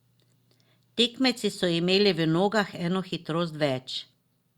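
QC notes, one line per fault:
No audible technical faults were found in the signal.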